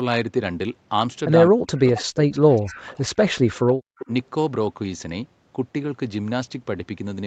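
Speech in which the talker's level sinks, by as much as about 40 dB, for roughly two seconds of the stretch from 1.49 to 3.78 s: speech suppressed in double talk, likely because the echo canceller could not separate this talker from loudspeaker echo while the far side spoke. From 2.31 to 2.82 s and again from 3.97 to 4.06 s, a faint second copy of the voice trails 202 ms behind, about 25 and 20 dB below the speech. This echo leak is likely residue that a loudspeaker-side echo canceller failed to remove. Nothing is heard above 8 kHz, which fits a wideband Opus call path at about 64 kbps.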